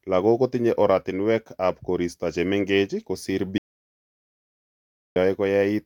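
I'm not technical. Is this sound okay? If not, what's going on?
No. There is an audio dropout to silence from 3.58 to 5.16 s, right after "oratinwekab koristo chemeng'ech kosiir". The speech stops dead for about 1.6 seconds with no background at all, likely because the input was briefly cut off while recording continued, so that stretch is lost.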